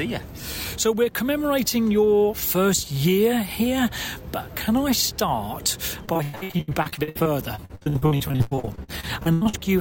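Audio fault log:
6.05–9.55 s, repeated packet loss (robotic sound): the audio turns choppy, breaking into dozens of short dropouts, the longest about 103 ms. Roughly two fifths of this stretch is patched-over sound. Packets repeatedly went missing or arrived too late. Each hole was filled by extending the last received sound, about 1.4 s of fill in total. The next loss followed so closely that these repeated fragments run together into a robotic texture.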